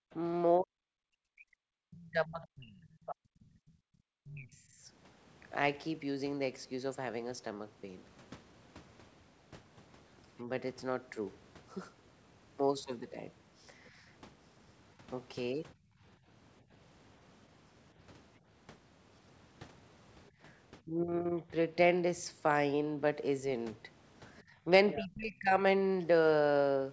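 Right at the start, 0 to 0.11 s, the room tone drops by about 40 dB for a split second. That's background gated by the echo canceller: it hears the loudspeaker going and clamps the mic hard. It does it again at 3.55 to 3.95 s (about 40 dB), at 15.75 to 16.73 s (about 21 dB, dipping for less than half a second in total), at 20.29 to 20.4 s (about 17 dB) and at 24.43 to 24.65 s (about 16 dB). The background just ducks and comes back each time the canceller lets go.

From 0.6 to 4.88 s the talker keeps dipping, down by something like 40 dB at worst and for around three seconds in total. That's speech suppressed in double talk, likely because both ends were talking and the canceller couldn't separate the local voice from the echo, so it pulled everything down. Shorter, shallower bouts follow at 20.85 to 21.54 s, down roughly 15 dB, and at 24.65 to 25.61 s, down around 25 dB.

At 1.98 to 3.15 s and again at 24.38 to 25.05 s there's a second voice underneath, roughly 15 dB below the talker. 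That's the other side's voice leaking through, likely loudspeaker playback the canceller didn't fully strip from the mic. Nothing is heard above 8 kHz anywhere in the clip, which fits a G.722 call at 64 kbps.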